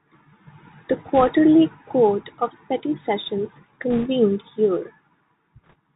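Throughout, the speech sounds boxed-in and dull, with scratchy s sounds and a granular hiss: the Bluetooth CVSD headset codec, whose one-bit, 64 kbps-style coding cuts everything above 4 kHz. From 1.15 to 1.30 s, 3.91 to 4.08 s and 5.64 to 5.74 s, a brief rushing crackle rides over the speech, with no sharp clicks. These are bit errors on a Bluetooth voice link, with roughly a couple of percent of bits flipped, the last burst slightly lighter.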